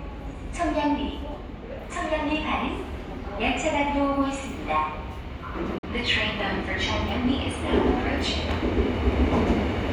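A recording of sounds with one glitch: at 5.78 s the output drops to silence for roughly 50 ms and picks back up at 5.84 s. That's a Bluetooth dropout, most likely a couple of audio packets not reaching the headphones in time and getting discarded. You can tell because the sound doesn't pause and resume where it left off. It comes back already moved on, as if it kept playing through the hole.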